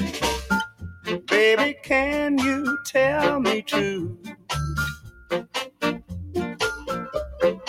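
A noise suppressor applied to music or sounds runs through the whole clip. Built for speech, it treats sustained, steady material as noise, so the level swings by around 10 dB as it ducks held sound and lets onsets pass, giving a pumping, thinning quality.

Sound cut by the noise suppressor occurs at 0.67–1.29 s, 1.74–1.9 s, 4.12–4.5 s and 4.95–5.82 s. Here it pulls steady or decaying sound down hardest, by about 17 dB at its deepest and about 8 dB in the short 1.74 s dip, so tails collapse early.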